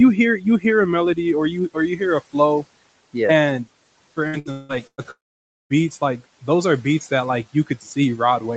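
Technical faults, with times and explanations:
0.38–0.65 s and 7.53–7.87 s, speech cut by the noise suppressor: the suppressor mistook parts of the speech for noise and turned them down by about 14 dB and about 11 dB. Roughly 150 ms and 100 ms of sound come out swallowed and faint. On a spectrogram, energy fades out there, and the waveform envelope dips abruptly.
4.27–5.08 s, repeated packet loss (robotic sound): five gaps, the longest 176 ms, were patched by stretching the preceding sound. Concealment covers about half the span, so the audio turns choppy. On a spectrogram this looks like smeared, repeated harmonic bands alternating with fresh segments.
5.11–5.73 s, long network dropout: the likely cause is that no audio arrived for about 600 ms. A brief continuation of the last sound buzzes and fades, then about 530 ms of near-silence follows. The waveform flattens almost to nothing, and the spectrogram goes blank before the sound resumes.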